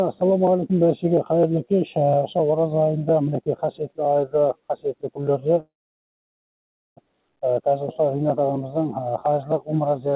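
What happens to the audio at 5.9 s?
At 5.9 s the audio is inside a call audio freeze running from 5.6 to 7.00 s. The last sound carries on only briefly as a fading buzz or hiss before about 1.27 s of silence, and then the audio resumes exactly where it stopped, with nothing lost but everything after it about 1.37 s late. This is likely packets stalling in transit while the jitter buffer ran dry. The waveform shows a short decaying tail and then a flat line, and the spectrogram shows a blank column below the 4 kHz call-band ceiling.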